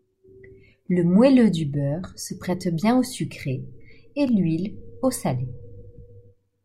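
A speech clip with a single block of digital silence at 4.29 s, between "bien au sucré et" and "l'huile au salé". For about 0.67 ms the signal drops straight to silence and returns with no fade, so the two hard edges merge into one short tick rather than an audible hole. The length fits a 32-sample block that was not filled in time. On a waveform it shows as a tiny flat line with abrupt steps on both sides; a spectrogram shows a thin vertical broadband streak.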